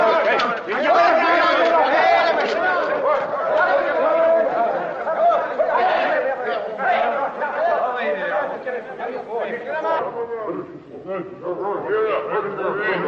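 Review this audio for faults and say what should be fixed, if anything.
Section at the wrong speed from 9.99 s to the end at 13.08 s: the sound drops to 0.763x speed, about five semitones lower and slower, likely from a clock mismatch. Prevent it by checking sample-rate and clock settings match across the editing and playback chain.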